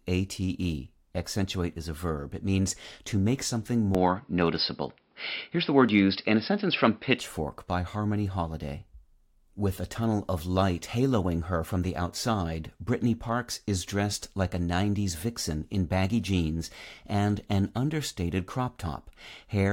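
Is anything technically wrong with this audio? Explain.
Yes. Just after "means to make something", from 3.95 to 7.2 s, the input likely switched to a poorer device with a narrower band. Nothing above 5.3 kHz passes, so the speech turns dull and boxy, slightly louder, over faint new background noise, with no gap at the switch.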